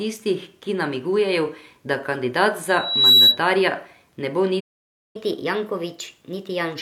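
Loudspeaker feedback squeal, from 2.69 to 3.40 s, begins just after "ki namigujejo da kandidat". A microphone is picking up the loudspeaker it drives, and at 3.9 kHz the round-trip gain rises above one, so that frequency keeps reinforcing itself. It is heard as a single high tone swelling over roughly 0.4 s to sit around 10 dB above the speech.

Playback stall, from 4.60 to 5.16 s, comes right after "ne bo". The speech stops dead mid-flow and the output goes silent for about 0.55 s before resuming. The likely cause is the player running out of buffered data, or its playback thread being held up, so it had nothing to send to the output until it recovered.

Catch-up at higher speed starts at 5.16 s, straight after the stall, and runs to the end of the clip. To recover the time lost in the gap, the player resamples its backlog and plays it at 1.15 times normal speed. Because resampling shifts pitch along with tempo, the speech sounds hurried and about two semitones higher, with a slightly chipmunk-like quality throughout this final stretch.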